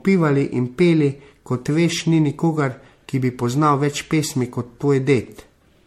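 Throughout, the speech sounds swirly, hollow and smeared, with blurred attacks and nothing above 16.5 kHz. That is worse than one pass near 64 kbit/s would give, so the likely cause is generation loss from about seven repeated MP3 encodes.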